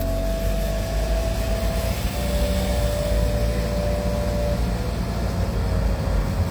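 Nothing here trips the ear: no technical faults turn up anywhere in this recording of sounds.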